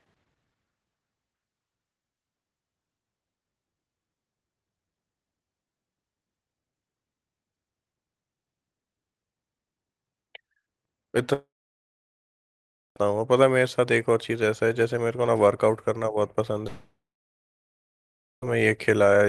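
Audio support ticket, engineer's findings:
Long network dropout, 11.33–12.97 s and 16.67–18.46 s. Audio stops for about 1.6 s and 1.75 s. Last sound is stretched into a fading buzz, then near-silence for roughly 1.5 s and 1.4 s. Playback resumes later with the gap content gone. Likely cause: packet loss on the WebRTC call path, with the jitter buffer concealing and then giving up. Opus coding noise and an 8 kHz top end are present.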